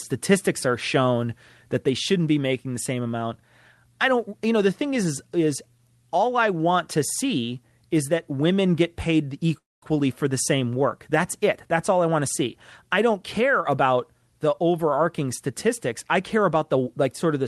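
This speech clip, carried over a call path whose coding limits the top end to around 12 kHz, has a call audio freeze from 9.57 to 9.84 s. Incoming packets were likely held up in transit, so the jitter buffer ran dry and the receiver had to improvise. It stretches the last sound briefly before dropping to silence for about 0.21 s. When delivery resumes, the speech carries on exactly where it stopped, with nothing lost but now running about 0.25 s late.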